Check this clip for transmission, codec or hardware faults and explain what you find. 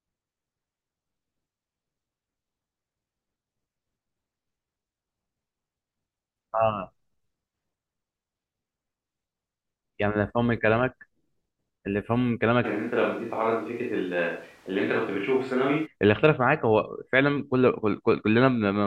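One fault stands out in the speech. A switch to a distant microphone runs from 12.66 to 15.85 s, likely because the close microphone's feed dropped out and a farther pickup took over. The voice abruptly turns roomy and hollow and thin in the bass. It falls by about 5 dB, and room noise rises to around 30 dB below the speech before everything snaps back.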